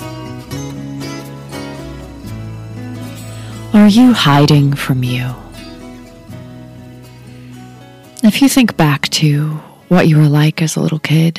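Hard clipping hits three times: from 3.75 to 4.90 s, from 8.25 to 9.27 s, and from 9.92 to 11.27 s. In each stretch the signal is driven roughly 9 to 10 dB past what a stage in the chain can carry, so every peak is sheared off flat. Those squared tops throw harmonics high into the spectrum, and the loud parts turn into a harsh, gritty fuzz rather than isolated crackles.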